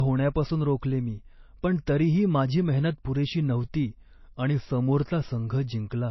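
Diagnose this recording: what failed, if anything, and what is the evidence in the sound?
The codec stage failed. The speech has nothing above 5.8 kHz for its whole length. The top end is gone, leaving a dull, band-limited sound with the smeared artefacts of heavy lossy coding. That cut-off fits a very low-bitrate MP3 encode, around 24 kbit/s. The file now sits at a high bitrate, which points to low-bitrate audio saved at a high bitrate, likely a re-encode. The second pass kept the damage and could not restore what the first removed.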